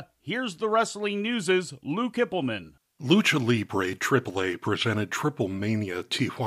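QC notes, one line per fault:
No faults were heard in this speech clip. There is nothing to log for it.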